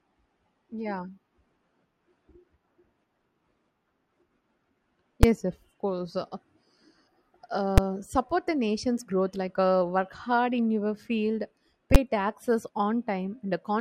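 A calculation in the processing chain produced infinite or invalid numbers that were clamped to full scale, giving invalid numbers at full scale in this speech clip. The short blocks, fitting 256 samples at 5.23 and 7.78 s and 512 samples at 11.95 s, each come out as a single loud bang.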